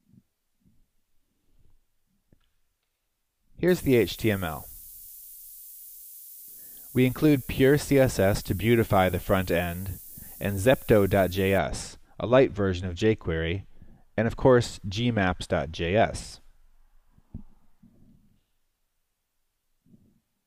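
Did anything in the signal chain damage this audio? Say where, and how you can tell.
Yes. From 3.68 s to 11.58 s, a steady, thin hiss sits roughly 15 dB below the signal and rises sharply toward the top of the band. This is low bit depth with noise shaping from sample-format conversion to 7 bits, with rounding error pushed upward in frequency.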